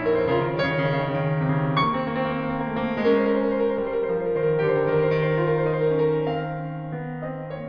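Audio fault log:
No faults heard in the music; nothing to log.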